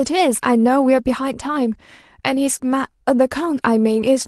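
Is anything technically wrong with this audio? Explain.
No, nothing is technically wrong with this speech.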